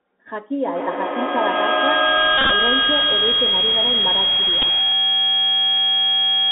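From start to end, the Bluetooth CVSD headset codec confines the sound to roughly 250 Hz to 3.4 kHz. The one-bit coding, which fits 64 kbps, adds granular hiss and scratchy sibilants.

From 0.65 s a feedback howl builds and lasts to the end. A microphone-loudspeaker loop gains on each trip. It peaks about 8 dB above speech, near 3 kHz, pulsing roughly every 150 ms.

Between 2.38 and 2.51 s the Bluetooth headset packet is repeated. About 90 ms of lost audio is replaced by old data, in runs up to around 30 ms. It sounds like a brief buzz near 267 Hz. At 4.62 s a 7.5 ms repeat gives a small tick.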